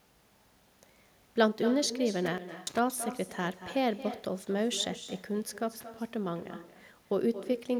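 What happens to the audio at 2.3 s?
At 2.3 s the sound is inside an intermittent contact fault running from 2.26 to 2.79 s. A loose plug or cable briefly breaks the connection, so the signal drops out for about 291 ms, with crackle as the contact opens and closes and only faint hiss or mains buzz in between. That scratchy edge and residual noise floor set it apart from a network dropout, which cuts to clean, abrupt silence.

The same moment also carries echo with no canceller, present through the whole clip. The far end's loudspeaker feeds its microphone, and nothing strips that out, so the speech returns about 13 dB quieter and thinner, roughly a fifth of a second late. Because it arrives as a distinct delayed copy rather than a smooth decaying tail, it reads as echo, not room reverberation.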